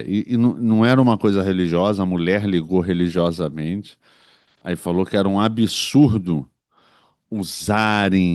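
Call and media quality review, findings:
No audible faults found.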